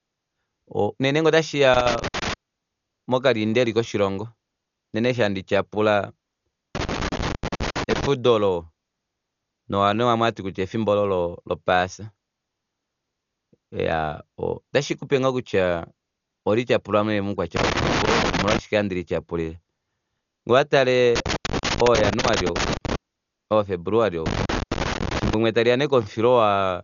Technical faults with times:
0.00-26.84 Dolby Digital compression
1.74-2.34 loose connector crackle
6.75-8.06 loose connector crackle
17.56-18.59 loose connector crackle
21.16-22.96 loose connector crackle
24.26-25.34 loose connector crackle

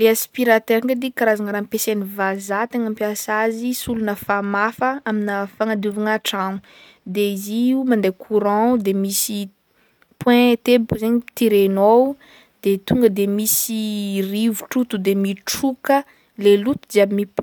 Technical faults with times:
none

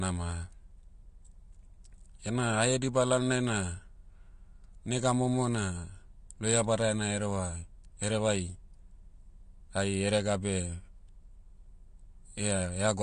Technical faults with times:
0.00-13.03 AAC compression

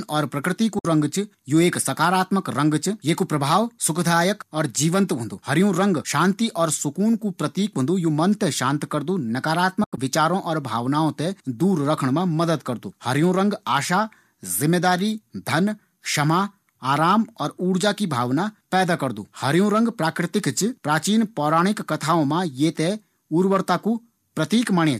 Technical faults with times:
0.79-0.85 AAC frame loss with muting
9.84-9.98 AAC frame loss with muting

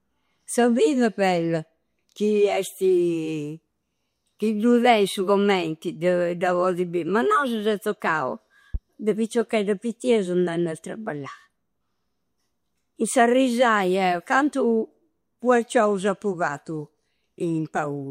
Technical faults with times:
8.74-8.78 loud pop

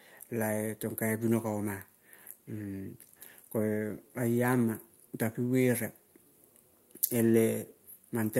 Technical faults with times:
none

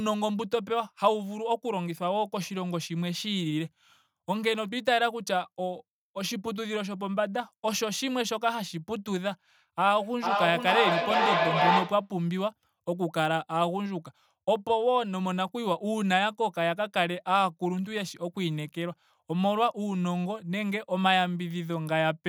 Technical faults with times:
9.83-12.13 feedback echo between two devices

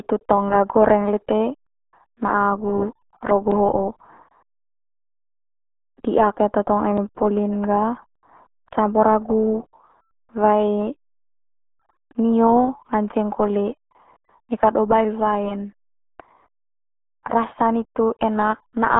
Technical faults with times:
0.00-18.99 RealAudio 14.4 codec

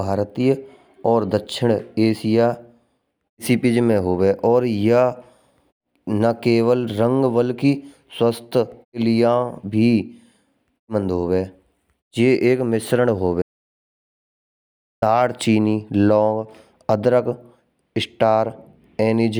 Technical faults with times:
13.42-15.02 audio dropout to silence

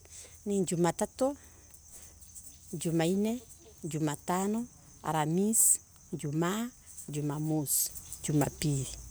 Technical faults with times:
7.89-9.11 sudden gain jump

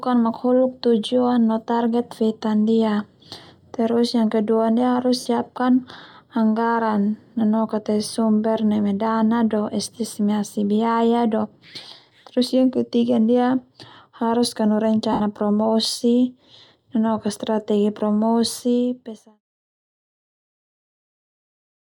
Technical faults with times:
5.19-5.26 lost LE Audio frames
15.12-15.20 lost LE Audio frames

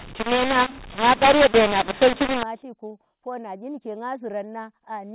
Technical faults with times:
0.00-2.43 mu-law and A-law mixed up

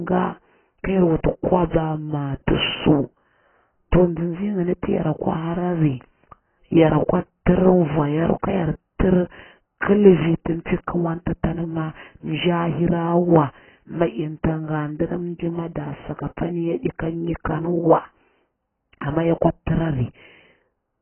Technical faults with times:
0.00-21.01 AAC compression
2.46 pre-echo

